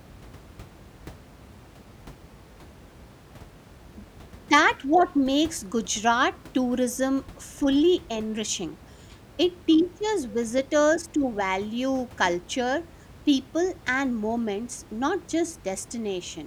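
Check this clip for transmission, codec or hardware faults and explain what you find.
Nothing stood out on listening to this speech recording, which carries only a low level of room noise, about 23 dB below the speech.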